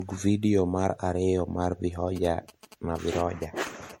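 Throughout the speech the sound is swirly, smeared and hollow, with blurred attacks and nothing above 16.5 kHz. The likely cause is generation loss: repeated MP3 decoding and re-encoding, around five passes, at what sounds like 64 kbit/s. Each pass requantises on a shifted frame grid, so noise and spectral holes accumulate.

From 2.16 to 3.92 s a galloping dit-dit-dit pattern of short buzzes at about 217 Hz sits roughly 20 dB below the speech. These are GSM signalling bursts from a nearby 2G phone, which the audio circuit rectifies.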